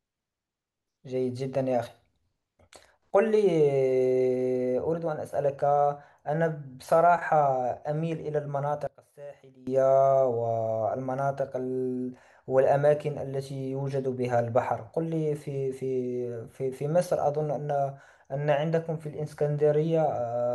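From 8.87 to 9.67 s, the speech drops by about 20 dB and turns faint. The likely cause is one channel inverted. The reversed polarity cancels the shared centre content on mono summing, leaving only a faint difference signal.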